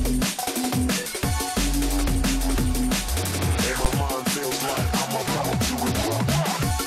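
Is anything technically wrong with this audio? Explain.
Yes. At 3.85 s a single loud bang cuts through the sound. This is invalid numbers at full scale: a calculation produced infinite or invalid values, pinning the output at one extreme value for about 11 ms, which fits a 512-sample block.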